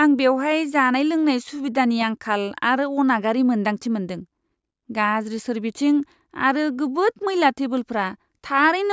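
No audible technical faults.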